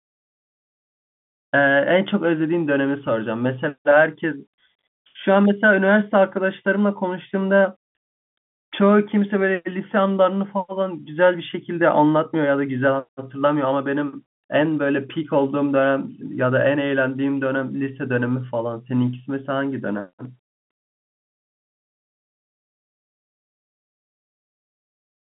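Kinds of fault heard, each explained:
No kinds of fault are heard in this speech clip, so there are none to explain.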